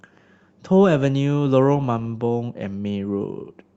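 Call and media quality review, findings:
No findings for this call and media quality review; the speech comes through the call path as expected for a band-limited call codec.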